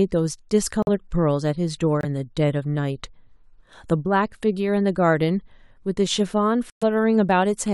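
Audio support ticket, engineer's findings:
Corrupt frame muted at 0.83–0.89 s, 2.01–2.05 s and 6.70–6.83 s in speech. Abrupt silent holes of 64, 42 and 134 ms, the last spanning several frames. Decoder rejected bit-damaged compressed frames, and the player substituted silence. Timing preserved.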